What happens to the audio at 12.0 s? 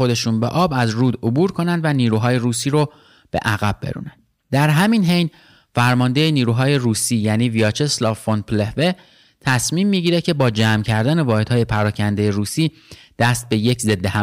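At 12.0 s the speech is hard clipped, as it is across the entire recording. Driven about 11 dB past the ceiling, around one percent of samples have their peaks sliced flat, and those squared tops add high harmonics heard as harsh crackle on louder syllables.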